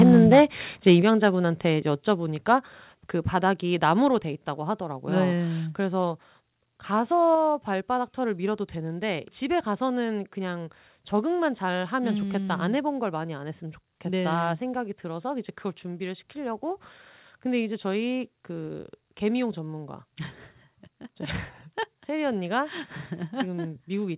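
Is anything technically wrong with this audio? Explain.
Yes. There are two faults. Microphone overload occurs at 0.00–0.43 s, 0.87–0.94 s and 1.24–1.27 s: peaks about 7 dB, then about 2 dB over full scale are flattened, likely from excessive input gain, giving harsh crackle. Microphone volume stepped down at 0.03, 1.02, 2.04, 3.06, 4.08 and 7.35 s, in abrupt drops of about 2, 6, 2, 1, 3 and 3 dB, likely automatic gain reduction reacting to the clipping. The audio also carries the coding noise and 4 kHz band limit of a telephone-grade call path, consistent with 64 kbps G.711.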